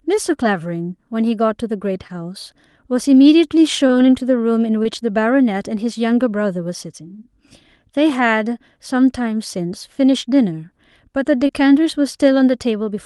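Four short concealed packet losses, at 2.07–2.11, 3.87–3.91, 4.83–4.87 and 11.47–11.51 s: roughly 20 ms went missing each time, and the receiver papered over it, leaving a brief smeary wobble in the speech.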